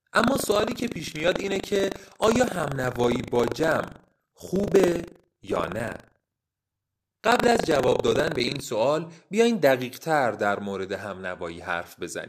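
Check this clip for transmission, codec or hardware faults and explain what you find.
Buffer tearing runs from 0.0 to 8.60 s. The writing program and the reading hardware have slipped, so roughly a tenth of each 40 ms cycle replays speech from about 70 ms earlier, joined with hard edges. It sounds like a robotic 25 Hz rattle on the speech.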